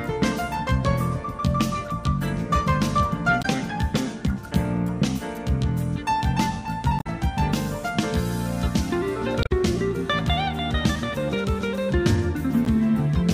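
At 3.38 to 3.45 s there is a short glitch. Similar blips follow at 6.96 to 7.07 s, 9.40 to 9.52 s and 12.65 to 12.68 s. Each is damaged data in a compressed stream. Some bytes in the encoded file were lost or overwritten. The decoder misreads those frames, loses sync and hunts for the next valid frame header. Each glitch lasts only 30 to 120 ms.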